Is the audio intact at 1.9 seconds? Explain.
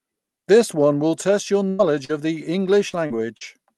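No. At 1.9 s the audio sits inside a stretch of repeated packet loss, producing a robotic sound, which runs from 1.69 to 3.43 s, starting just after "one will test your". Five separate gaps appear there, the longest 95 ms. Each hole is patched by stretching the preceding sound across it, so the audio comes out choppy with pieces missing. About 14% of the span is concealed, with other fragments dropped outright.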